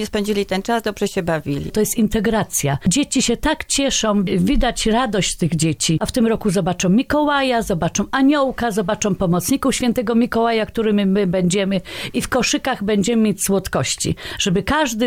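No technical faults are audible anywhere in the clip.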